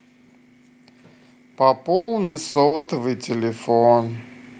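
At 1.85 s the automatic gain control judges the input too quiet and begins raising its gain, climbing by about 10 dB until 4.28 s. Speech and background noise swell together over those two and a half seconds, so the whole sound grows steadily louder.

From 1.95 s to 2.90 s, repeated packet loss interrupts the stream with five separate gaps, the longest 120 ms. Each gap is filled by extending the previous sound, so nearly half of that stretch is concealed, and the speech turns choppy and robotic with pieces missing.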